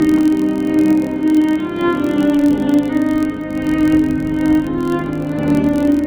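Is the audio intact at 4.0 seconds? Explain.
No. At 4.0 seconds, as throughout the clip, a filter restarted on every block resets its state at each block boundary, so each block opens with a small transient. This produces a steady buzz at about 43.1 Hz that tracks the signal's level, consistent with a 1024-sample block.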